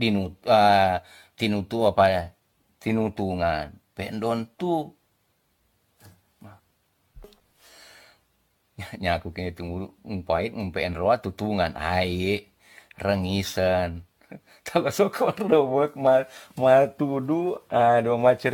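Throughout, the speech sounds swirly and hollow with blurred consonant attacks and nothing above 17 kHz, likely generation loss from around ten repeated lossy encodes, fitting AAC-LC at 96 kbit/s. A single encode at that bitrate would sound far cleaner.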